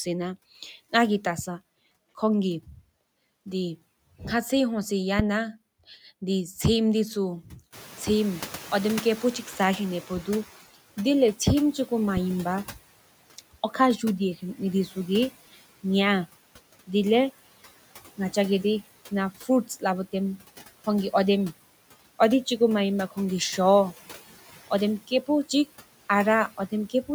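Throughout the speech, noise suppressor artifacts pull steady background noise down by about 16 dB, leaving residue that appears as speckled, patchy low-level energy between syllables on a spectrogram. At 5.19 to 5.51 s a phantom power thump, a supply step passing through the input's coupling capacitors, gives a deep bump decaying over 72 ms, seen as one large low-frequency swing in the waveform. From 7.72 to 10.56 s the noise suppressor is catching up: room noise jumps by about 16 dB at around 7.5 s, the estimate lags, and the suppression is at first only about 11 dB, so broadband haze fills the spectrogram before fading over 2.84 s. At 12.17 to 12.33 s a second phantom power thump decays faster, over 35 ms, making a shorter, tighter low-frequency spike.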